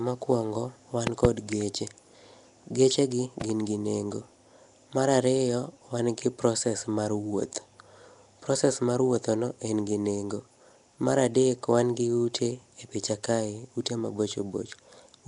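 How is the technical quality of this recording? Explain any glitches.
The recording has two audible problems: a compressed, degraded sound throughout, and two short bursts of popping near the start.

Nellymoser compression runs through the whole clip. The rough, hissy halo and smeared, underwater tone point to the likely cause: the Nellymoser Asao codec, at a rate around 44 kbps. It codes the audio in small blocks with very few bits per sample. Weaker frequency bands get no bits and are filled in with noise, which produces the grainy texture. Nothing is present above 10.6 kHz.

Loud pops occur at 1.07 to 1.27 s, just after "mokwongo wan", and at 3.41 to 3.52 s, just before "gi nengo". Each is a pair of sharp pops. The first pair rises roughly 20 dB above the speech, and the second is quieter, around 10 dB above it. The speech continues underneath both. The likely cause is sudden voltage spikes from a connector, switch, static discharge or driver glitch, which the downstream circuitry shaped into brief pulses.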